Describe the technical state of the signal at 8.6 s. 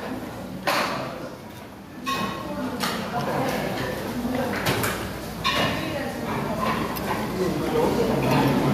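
Gain pumping is present at 8.6 s, as it is throughout the clip. The level is pulled down each time a loud sound arrives, a swing of around 10 dB. The likely cause is an input gain set far too high with a fast limiter or compressor clamping down on every peak, which squeezes loud and soft parts toward one level and leaves the sound flattened and squashed.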